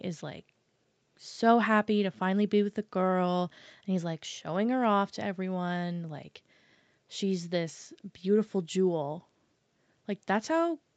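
Nothing here counts as a fault: the speech comes across as an ordinary call, with the band topping out around 8 kHz as you'd expect from the call processing and the Opus link at 64 kbps.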